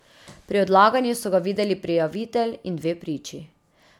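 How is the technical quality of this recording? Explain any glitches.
The speech has a persistent technical fault. Throughout, it sounds swirly, smeared and hollow, with blurred consonant attacks. This is generation loss, likely from repeated MP3 encoding, around four passes at about 128 kbit/s, each adding fresh quantisation noise and spectral holes.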